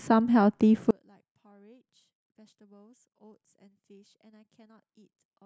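From 0.91 s to the end, the speech drops by about 35 dB when heard in mono. The centred voice and the low end nearly disappear. What remains is a faint trace of the sound. The likely cause is one channel inverted, meaning one side of the stereo pair has reversed polarity. When the two sides are summed, everything they share cancels. Only the small difference between them survives, so the voice seems to collapse into near silence.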